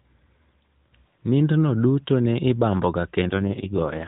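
At 3.22 s, just after "duto ne ibamboga", the codec suffers an AMR rate drop: the link falls back from a rate that sounds like AMR-NB's full 12.2 kbps mode to one that points to its lowest, about 4.75 kbps. The narrowband speech, lightly coloured by the codec until then, keeps the same 4 kHz ceiling and continues without a gap, but turns rough, buzzy and synthetic through to the end of the clip at 4.07 s.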